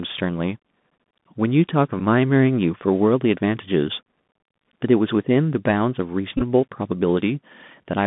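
Throughout, the speech carries the Bluetooth CVSD headset codec's signature: a band of roughly 150 Hz to 3.6 kHz, scratchy s sounds and a granular hiss, consistent with 64 kbps one-bit delta coding whose step size lags loud high sounds. That grain sets it apart from the cleaner dullness of a plain low-pass filter.

At 2.00 s a Bluetooth headset packet is repeated: a short tick covering about 7.5 ms, which fits two lost packets decoded again from stale bits. From 6.38 to 6.42 s repeats scattered over 37.5 ms, the longest run around 15 ms, turn into a brief buzz near 267 Hz. That pitched buzz, rather than silence, distinguishes repeated packets from dropouts.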